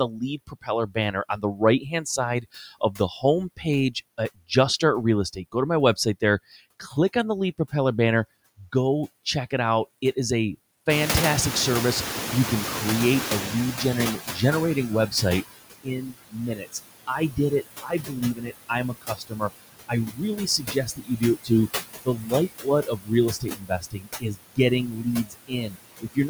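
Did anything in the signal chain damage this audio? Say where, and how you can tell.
Yes. The damage comes from the call-processing stage, where the noise suppressor shows three separate faults.

Noise suppressor artifacts run through the whole recording. The suppressor treats the steady background as noise and turns those bands down frame by frame, by about 17 dB. You can hear the residue sink in the gaps and lift again under the voice.

Speech cut by the noise suppressor happens in six places: 0.08–4.51 s, 5.33–6.22 s, 6.8–7.73 s, 13.78–14.38 s, 15.83–21.5 s and 22.04 s to the end. The suppressor mistook quiet parts of the speech for noise. Those quiet parts drop by up to about 21 dB in the first, fifth and sixth spans, where roughly one to two seconds of speech sound swallowed. The drops in the middle spans are shorter and shallower, about 10–16 dB.

Noise suppressor catching up occurs from 10.89 to 14.99 s. 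The room noise jumps by about 21 dB near 11 s and ends up about 10 dB below the speech. The suppressor's noise estimate takes around 4.1 s to follow that jump, so the louder background comes through with less reduction at first. It then sinks gradually as the suppressor settles at about 14 dB of cut.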